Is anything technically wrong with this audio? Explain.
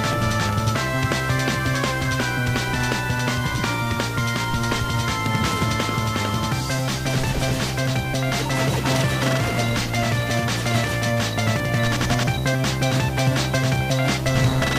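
Yes. Throughout, the audio shows low bit depth without dither: it was likely rounded to about 6 bits with no dither, so the error tracks the signal. Quiet passages turn grainy, with distortion roughly 25 dB below the sound that shifts as it changes.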